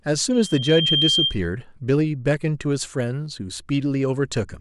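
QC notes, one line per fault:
0.33–1.38 s, loudspeaker feedback squeal: a pure tone near 3.2 kHz swells out of the speech over roughly half a second and settles around 5 dB above it. The microphone is hearing its own loudspeaker, and at that one frequency the loop gain passes unity, so the tone feeds itself. On a spectrogram it is a single bright horizontal line that thickens as it rises. The waveform envelope climbs steadily, then levels off.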